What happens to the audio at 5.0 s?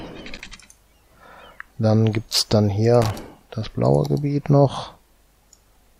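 Nothing goes wrong at 5.0 s: the audio plays through that point intact, with no dropout, click or other fault.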